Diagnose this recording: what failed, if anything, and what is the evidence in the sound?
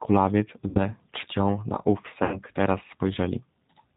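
The call path's codec is the cause: a G.729-style coder, consistent with 8 kbit/s, band-limits the speech below 4 kHz and leaves it slightly rough and synthetic throughout.

Network packet loss concealed by the speech codec: at 0.69–0.80 s and 2.24–2.41 s the decoder extrapolates over about 60 ms and 80 ms of lost audio, giving stretched sound that fades before recovery.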